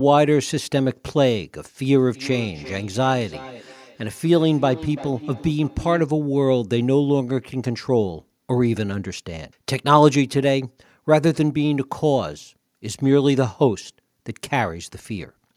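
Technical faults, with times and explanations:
1.93 to 6.11 s, feedback echo between two devices: the speech keeps coming back at roughly a third of a second, thinner and ringier each pass, peaking about 17 dB under the voice. A second device in the room is replaying this mic's feed, which the mic catches again, and the local echo canceller can't remove what it didn't play.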